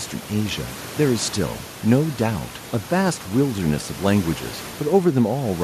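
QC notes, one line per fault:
No faults were heard in the speech. Room noise sits quietly underneath, about 19 dB below the speech, as part of the recorded space.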